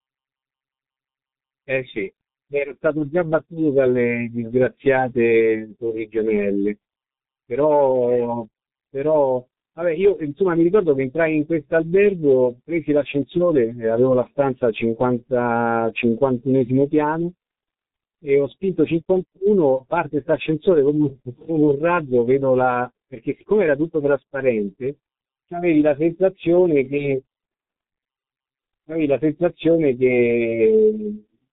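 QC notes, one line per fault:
Throughout: G.723.1 codec, heavy damage. Nothing passes above 3.8 kHz, so the speech is muffled, and slow updates of the voice model across long frames leave it hoarse with smeared consonants, consistent with a low-rate setting near 6.3 kbit/s.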